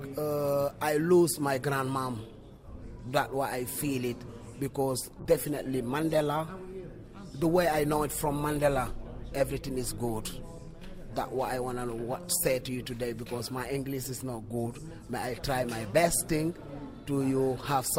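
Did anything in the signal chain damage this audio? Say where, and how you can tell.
Yes: a call bitrate drop from 5.21 s to 8.95 s, at the codec stage. The bandwidth estimate fell, so the encoder coded far more coarsely for about 3.7 s. The audio turns rough and dull, which fits a fall from around 128 kbps to roughly 23 kbps.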